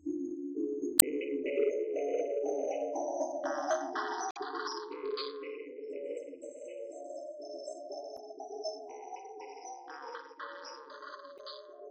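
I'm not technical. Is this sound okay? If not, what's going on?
No. Short glitches cut into the sound at about 0.96, 4.28, 8.14 and 11.35 seconds, each lasting under a tenth of a second. This is damaged data in a compressed stream: bits of the file were corrupted, so the player briefly decodes garbage before recovering.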